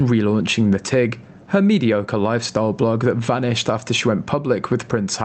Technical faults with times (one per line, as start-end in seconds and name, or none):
0.00-5.24 gain pumping